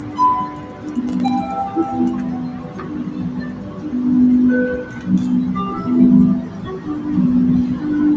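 Across the whole clip the sound pumps and thins, its level swinging by roughly 10 dB as held parts and tails sink while attacks pass. This is a noise suppressor applied to music or sounds: a speech-oriented suppressor, left on, treats steady material as noise and turns it down.

Sound cut by the noise suppressor dips by about 5 dB from 0.0 to 0.18 s and from 0.49 to 0.85 s. The suppressor judged these stretches to be noise and pulled them down harder than their surroundings.

From 1.09 to 1.28 s a short burst of gritty crackle rides on the sound. This is processor overload crackle: the processor repeatedly failed to finish its audio buffers on time, leaving a handful of tiny silent gaps with hard edges, which fits a buffer of about 1.5 ms.

The same suppressor cuts return, again by about 5 dB, from 2.11 to 2.91 s, 3.08 to 3.84 s, and 6.42 to 6.87 s. In each, sustained or fading sound sinks or has its decay cut short. 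Nothing above 8 kHz is present, consistent with the call microphone processing in the chain.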